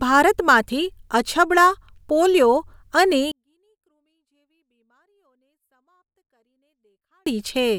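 A speech clip with a 24-bit alignment error (too quiet): from 3.32 to 7.26 s, right after "પોલિયો અને", the level falls about 48 dB. The waveform flattens to a near-silent line, and the spectrogram keeps its shape but turns very faint. The cause is 24-bit samples sitting in the low bytes of 32-bit words but being read as full 32-bit values.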